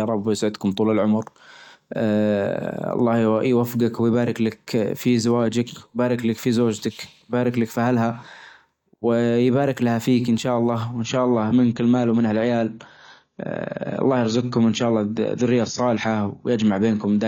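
Right after "فيك ان شاء الله", at 10.94 s, the adaptive stream drops to a lower bitrate and stays there to the end. Nothing sounds above 7 kHz and codec artefacts come up, which fits a fall from about 96 to 24 kbit/s AAC. The switch is abrupt, with no gap.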